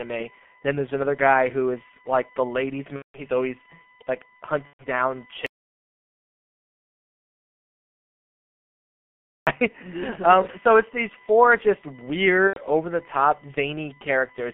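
Current drawn by the USB bus in 1 ms frames leaks into the analog path through power or ground. This USB whine sits under the speech for the whole clip as a fixed tone at 1 kHz, loudest at its 2 kHz harmonic, roughly 30 dB below the speech.

The speech also passes through the G.723.1 codec throughout. Its low rate, which fits about 6 kbit/s, and its slow-updating voice model are heavily damaging here. The line band of 200 Hz to 3.4 kHz leaves the speech muffled and hoarse, with smeared consonants.

From 2.96 to 3.19 s, between "is like the ladies'" and "always like", packets were lost. The decoder filled roughly 180 ms, consistent with six 30 ms frames, by extrapolating its last pitch and filter at falling gain. The result is VoIP packet loss concealed by the speech codec: a stretched, fading sound that is muted from the third lost frame, with weak speech for a moment afterward.

The same concealment returns from 4.67 to 4.85 s, just after "always like". 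About 120 ms, fitting four frames, is briefly stretched and then muted.

From 5.46 to 9.47 s the input was cut off, likely by a lost device, link or mute, while the recorder kept writing silence. This audio dropout to silence ends the sound abruptly and leaves about 4 s of dead silence without room tone before the sound resumes mid-flow.

From 12.47 to 12.60 s, right before "over the top", a third concealed loss of about 90 ms, fitting three frames, smears the speech into a brief fading sound, and the speech recovers only gradually.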